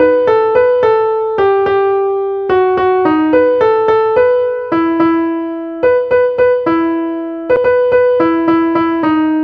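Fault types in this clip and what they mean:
CD skip: at 7.56 s the laser jumps to another turn of the disc's spiral, so a mute of only a few milliseconds occurs before playback resumes elsewhere. Unlike a plain dropout, the audio doesn't continue from where it stopped.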